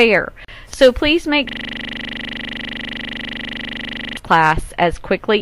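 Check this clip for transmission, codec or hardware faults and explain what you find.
Two faults are audible: a short gap at a join and a long system hang loop.

From 0.45 to 0.48 s there is a gap at a join of encoded pieces. Two separately encoded segments were butted together untrimmed, so encoder start delay and end-frame padding leave about 37 ms of silence with smeared edges. The sound then resumes where it stopped.

From 1.49 to 4.17 s a system hang loop takes over. The host or driver stalled while the audio hardware kept replaying its ring buffer, repeating one 40 ms slice dozens of times. At a 25 Hz repeat rate this comes across as a rapid, rattling stutter.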